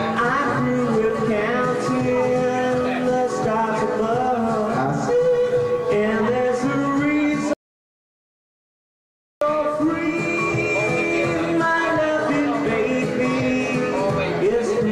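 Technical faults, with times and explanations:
7.53 to 9.41 s, audio dropout to silence: the sound stops abruptly mid-flow and the signal falls to silence for about 1.88 s, with no room tone or noise floor underneath, then resumes just as suddenly. That dead, total emptiness points to the recorder having kept writing samples while its input was gone, likely through a lost connection, a failed link or an accidental mute, so whatever occurred in that gap is unrecoverable.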